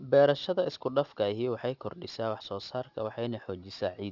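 Speech, and the whole clip carries aliasing from start to finish. Someone dropped the sample rate hard, which fits a conversion down to about 12 kHz from 44.1 kHz, without a low-pass filter first, so everything above 6 kHz folded back down into the band as wrong, unrelated frequencies. You hear it mostly on the sibilants, which come out gritty and metallic, with the folded junk sitting fairly low, roughly 25 dB under the signal, and the spectrum running right up to the 6 kHz edge.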